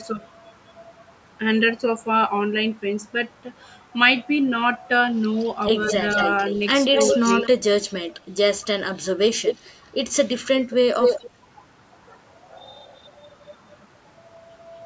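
Right at 0.12 to 0.22 s the sound dips by about 10 dB for roughly a tenth of a second, likely speech suppressed in double talk, with the canceller ducking this side while the other side talks. From 5.37 to 7.48 s a second copy trails the sound by 210 ms, nearly as loud as the original, likely an echo leak from a loudspeaker end whose canceller let some through. Within that stretch, 5.91 to 5.98 s sags a little, around 5 dB, and 6.92 to 7.65 s dips, dropping about 25 dB in places; both are likely double-talk suppression again. From 8.58 to 11.3 s the echo is back at a 220 ms delay and about as loud as the sound itself, likely the same leak. At 11.26 to 11.32 s there's a quick hole of about 20 dB, likely another suppression bite. From 12.85 to 13.77 s a very faint echo sits 229 ms behind, far below the main sound, likely a last bit of leak.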